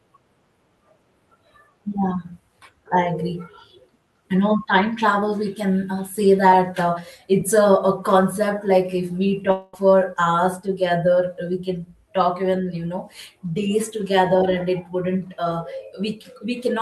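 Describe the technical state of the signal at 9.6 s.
At 9.6 s the signal sits inside a gap from 9.51 to 9.75 s, likely a long network dropout. About 0.22 s of audio never arrived. The receiver stretched the last sound into a fading buzz or hiss across the gap, with no true silence, before audio resumed.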